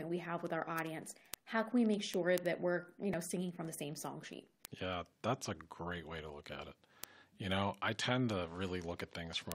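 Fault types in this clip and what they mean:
Word clock ticks: from 0.11 s to 9.52 s the speech carries a steady train of sharp, uneven clicks, roughly one every 40 ms, around two hundred in all. The pattern suggests a digital link read by a receiver on its own unlocked clock, drifting by something like 500 ppm against the sender. Each time the clocks slip past each other, a single sample is dropped or repeated, leaving a tiny discontinuity that is heard as a tick.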